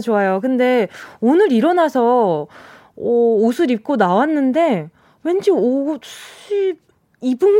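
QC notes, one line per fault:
No technical faults were found in the signal, and continuity stays steady across the whole recording.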